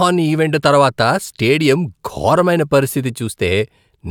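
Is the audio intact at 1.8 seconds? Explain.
Yes, the speech at 1.8 seconds plays through intact, with no dropout, click, distortion or other fault at that moment.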